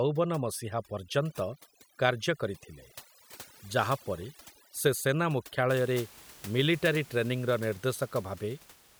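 A speech recording suffers from overdone noise removal from the start to 5.69 s. The noise reduction is set far too strong. Frequency bands near its noise estimate are pushed down or switched off entirely. Quiet parts of the voice are caught and removed along with the noise. The background drops and breaks up into twinkling specks. After 5.69 s, the room noise sits about 21 dB below the speech.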